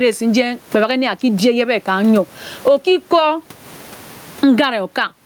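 Across the whole speech recording, the sound is squashed, with the gain swinging by around 20 dB. That squashed, breathing quality is gain pumping, likely from the microphone gain being set far too high, with a fast limiter pulling the level down on every peak. The room noise itself sits about 39 dB below the speech.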